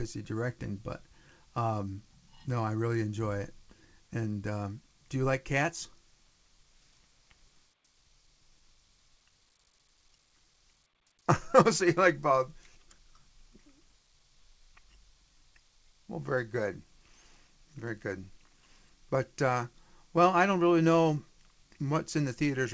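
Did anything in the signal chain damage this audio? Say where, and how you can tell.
No, nothing in the chain has damaged this speech; it has passed through a call path whose codec leaves no content above 8 kHz, which fits a wideband codec such as G.722, and no stage has introduced any defect.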